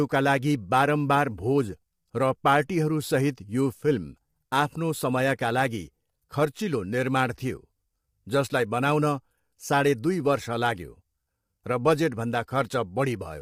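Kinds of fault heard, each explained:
Low-delay AAC compression: plainly audible coding damage throughout the speech, likely from AAC-ELD, whose short frames resolve pitch harmonics poorly, at a rate that fits around 32 kbps.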